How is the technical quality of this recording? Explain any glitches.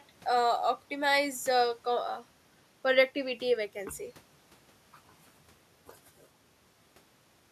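The technical quality of this recording is good, with no glitches to explain.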